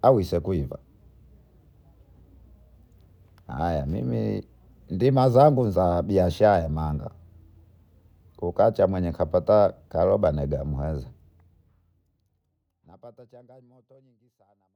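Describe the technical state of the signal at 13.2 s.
At 13.2 s the speech is intact, sitting inside a smooth fade-out that lowers the level gradually with no click or hard edge.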